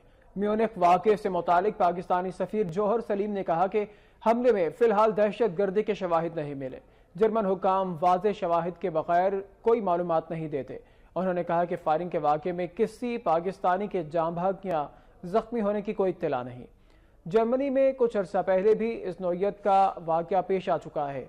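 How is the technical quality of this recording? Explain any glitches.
The quality takes a couple of hits: a soft start and some ticks at the chunk joins.

For the first 2.0 s you're hearing an adaptive stream starting at a low bitrate. The player grabbed a cheap version to get going fast, which fits Opus at around 24 kbit/s, then switched up once it had sized up the connection, consistent with about 64 kbit/s. Until 2.0 s the top end is dull and a bit fizzy, then it snaps brighter with no dropout.

The clicks are overlapping chunks, at 2.69, 6.70, 14.71 and 18.72 s. The audio was handled in 4 s blocks, and each block starts slightly before the previous one finished, so about 7 ms gets played twice at the seam. That tiny repeat is too short to hear as an echo. It comes across as a tick or stutter at each of those seams.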